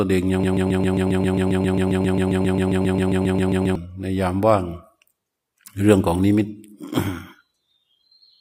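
From 0.44 s to 3.75 s the speech turns into a broken-record loop. A fragment about 134 ms long repeats back to back, 25 times in a row. Each pass is identical, so the sound becomes a rapid, mechanical stutter at roughly seven repeats per second. The likely cause is a stall in the player, encoder or stream, which kept resending the last chunk it held. The speech due in those three seconds never plays.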